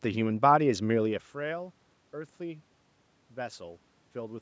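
No technical faults can be heard in this speech.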